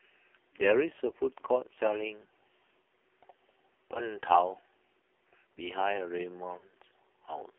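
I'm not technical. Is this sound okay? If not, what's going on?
No. The AMR narrowband mobile codec affects the whole clip. This is the compression used on older 2G and 3G phone calls. It rebuilds speech from a simple model of the throat and mouth instead of storing the real sound. Only roughly 300 Hz to 3.5 kHz gets through, so everything sounds thin and muffled. It is also set to a very low-quality mode here, which makes the speech buzzy and robotic.

Lost AMR speech frames cause three brief glitches: at 1.74 to 1.78 s, at 3.94 to 4.00 s, and a longer one at 6.58 to 6.66 s. Radio errors spoiled small chunks of the signal. The phone filled each gap by repeating the last good sound at falling loudness. You hear a quick dip or wobble, and the speech is rough for a moment after it.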